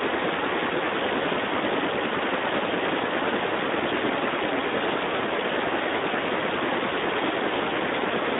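From start to finish the speech carries Speex codec damage, plainly audible as a hoarse, noisy grain. It fits a bitrate near 11 kbps, too few bits for the CELP excitation. Unlike a clean narrowband line, which only limits the passband to 250 Hz to 3.7 kHz, here the voice itself turns rough.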